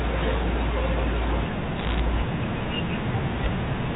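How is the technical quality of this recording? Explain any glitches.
The recording has one clear glitch, heard over telephone-band speech with nothing above 4 kHz. Bit errors on a digital phone line, 1.77 to 2.00 s: each flipped bit corrupts a single sample. Hits on sign or high bits produce sharp ticks, forming a brief crackle over the speech.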